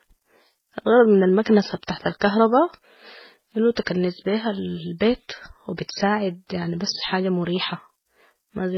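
Transcoding between lossy codecs, present for the whole clip: the speech has nothing above about 5.9 kHz, giving it a dull, boxed-in top end. Smeared, warbling artefacts are layered with a swirly, metallic sheen. That stacked texture likely comes from a low-rate MP3 pass at around 16 kbit/s followed by HE-AAC at around 20 kbit/s. The second encoder spent its small budget on the first one's damage, added its own, and kept the lowest cut-off.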